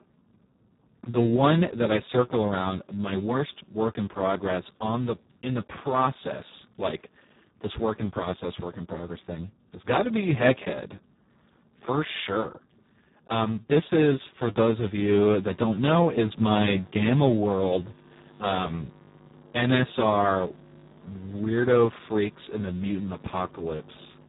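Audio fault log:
throughout Speex codec: heavy low-rate compression, around 4 kbps, starves the excitation, so speech sounds hoarse and noisy, with nothing above 3.8 kHz.
15.44–24.28 s mains buzz: switching spikes leak in from the 50 Hz supply, adding a steady raspy buzz about 25 dB below the speech until the end.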